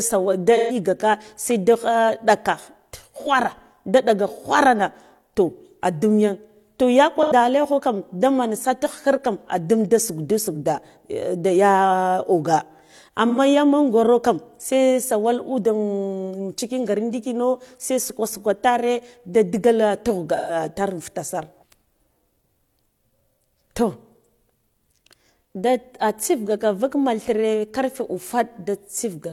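AAC frame loss with concealment occurs at 0.56, 3.21, 7.22, 13.28 and 20.37 s, with gaps of about 43 to 128 ms. The decoder patches each gap from the last good spectrum, so it sounds like a brief smeared, noisy blur. On a spectrogram it shows as blocky, frozen smears with lost harmonic detail.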